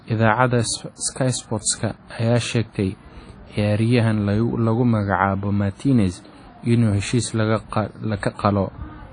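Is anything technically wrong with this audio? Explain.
Yes. Throughout the speech there's a washy, ringing quality and nothing above about 10.1 kHz, likely WMA compression at a low bitrate, which fits roughly 32 kbps.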